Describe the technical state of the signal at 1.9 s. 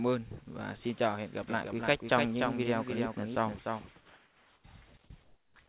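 At 1.9 s a doubled audio track is running, from 1.49 to 4.97 s: a dry copy trails roughly 300 ms behind, a few dB quieter, likely a second capture path.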